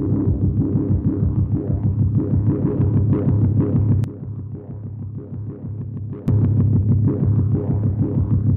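A gain setting was likely applied without a ramp at 4.04 s, giving a sudden gain jump: the level drops by about 12 dB in a single step, sound and background noise together, and stays low until 6.28 s, where it steps back up.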